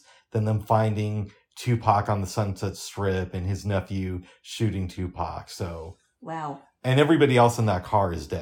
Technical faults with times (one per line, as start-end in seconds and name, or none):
none